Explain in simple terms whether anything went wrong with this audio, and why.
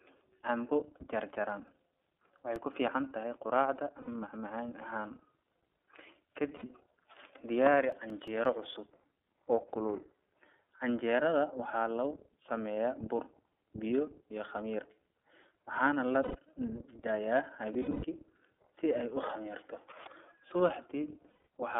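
Several things went wrong with this speech.

The whole clip has passed through the iLBC codec, a phone-call codec built for low data use. It keeps only the band from about 300 Hz to 3.5 kHz. That makes the voice sound thin and boxed in. It also squeezes each 30 ms slice of sound hard. The result is a plainly rough, slightly synthetic edge on the voice from start to finish.

There are two bursts of CD scratch ticks. One runs from 1.5 to 2.74 s, the other from 7.57 to 8.63 s. Each is a short string of tiny clicks, each only a few milliseconds long. They come at a steady pace, like something catching once per turn of a disc. This happens when a blemish wipes out more data than the player can repair. The player then patches over the damage, and each patch leaves a small tick.

Lost iLBC frames cause brief gaps at 4.01, 6.56, 16.23, 17.73 and 21.31 s. Pieces of the audio stream never arrived. 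The decoder filled each hole by repeating the last bit of voice with some noise mixed in. So the gap sounds like a held, buzzy vowel. The gaps at 4.01 and 6.56 s last about 60 ms each. The gap at 16.23 s lasts about 0.12 s. The one at 17.73 s is worst. Its losses are scattered over about 0.3 s, with the longest run near a tenth of a second. The voice snaps back right after each gap.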